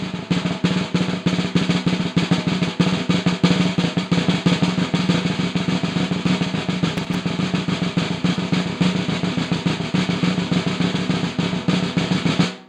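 A recording of everyday sounds carries a short burst of loose connector crackle from 6.97 to 7.15 s, lasting under a fifth of a second. A worn or dirty contact in the signal chain is making and breaking as it shifts, so the audio is chopped on and off. On a waveform this shows as jagged, irregular spikes and dropouts; a spectrogram shows scattered broadband vertical streaks across that span.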